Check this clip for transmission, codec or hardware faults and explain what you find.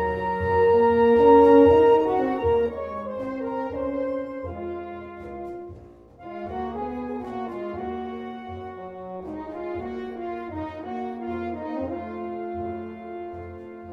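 One fault is present: zipper noise from 2.13 to 3.13 s. The level falls by about 10 dB in discrete jumps, roughly twenty per second, with no smoothing between them. Each jump leaves a small click, so a fast ticking rides on the sound during the fade.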